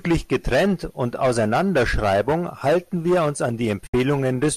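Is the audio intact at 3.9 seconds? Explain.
No. Right after "wir uns an", from 3.87 to 3.94 s, there is AAC frame loss with muting. About 70 ms of audio, consistent with roughly seven short frames of what is likely a low-delay AAC stream, was decoded as silence. The overlapping windows fade the sound out and back in, so unlike an abrupt sample dropout, the gap has softened edges.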